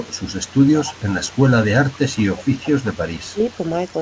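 Echo leak runs from 0 to 4.01 s: a faint copy of the speech trails it by 164 ms, sitting roughly 25 dB below it. The likely cause is a far-end loudspeaker whose echo canceller let some pickup return down the line.

Speech suppressed in double talk appears at 3.32 to 3.38 s, where the level dips by around 15 dB for roughly 70 ms. Presumably the canceller mistook the talker for echo while both sides overlapped. Throughout, the G.722 call path leaves nothing above 8 kHz.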